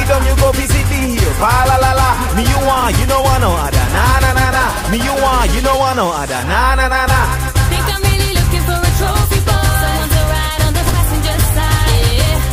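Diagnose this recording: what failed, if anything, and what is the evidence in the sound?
Frames out of order, at the network or packet-delivery stage feeding the decoder: two adjacent runs of coded frames reached the decoder swapped, and it decoded them in that sequence. At about 2.79 to 2.84 s, two 20 ms blocks trade places, which fits single frames being exchanged. At about 10.85 to 10.95 s, two 40 ms blocks swap, consistent with pairs of frames. Each spot sounds like a brief garbled flutter, and no time is lost.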